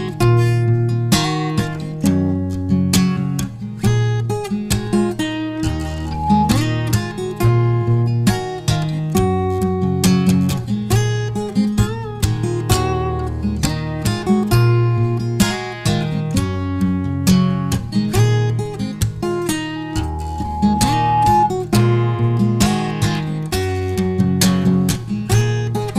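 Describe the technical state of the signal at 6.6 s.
At 6.6 s a loudspeaker feedback squeal is just ending: a microphone was picking up its own loudspeaker, and the loop gain passed unity at 844 Hz. From 6.05 to 6.62 s that pure tone swells over roughly a third of a second to sit about 5 dB above the sound.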